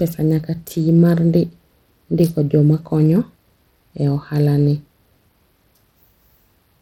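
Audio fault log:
Throughout: Bluetooth SBC compression. The speech has clearly audible damage: the top end thins out and flickers in and out, and a gritty, granular roughness with aliasing sits on the voice. This likely comes from SBC, the basic Bluetooth codec, running at a low bit budget that fits about 96 kbps. The codec splits the signal into a few wide bands and spends too few bits on the upper ones, so treble detail is starved and what remains is coarsely quantised.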